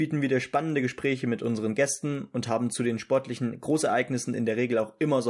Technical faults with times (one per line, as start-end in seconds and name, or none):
0.00-5.29 resampler restarted on every block